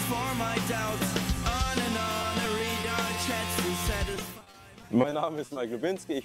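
Repeated packet loss (robotic sound) breaks up 2.22 to 2.85 s and again 4.15 to 5.57 s. Short dropouts up to 30 ms are patched by extending prior sound, giving choppy sound with pieces missing.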